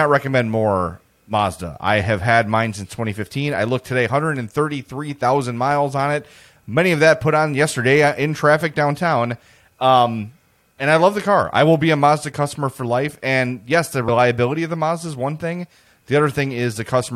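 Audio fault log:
14.07 s, compressed frames skipped: between "yes the" and "of the" the speech lurches forward, dropping about a tenth of a second of audio, which fits roughly four frames of 23.2 ms each that were never played, either missing from the stream or rejected by the decoder as corrupt.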